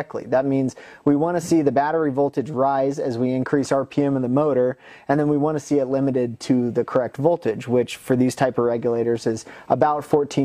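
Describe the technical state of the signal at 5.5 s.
Nothing is wrong with the signal at 5.5 s; the audio there is intact, with no dropout, distortion or other fault to be heard.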